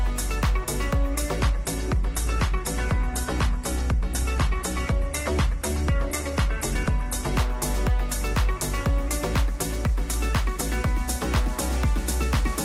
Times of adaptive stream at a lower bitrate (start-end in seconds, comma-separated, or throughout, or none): 1.37-7.37